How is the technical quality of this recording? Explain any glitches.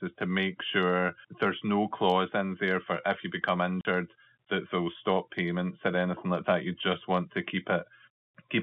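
There's one real glitch, at 3.81 to 3.85 s, right after "for if you become": packet loss filled with silence. About 40 ms of audio drops out cleanly, which fits four 10 ms packets going missing, and the receiver just plays nothing. You hear a short hole with hard edges. It's all on a telephone band of roughly 150 Hz to 3.5 kHz, typical of G.711 line coding.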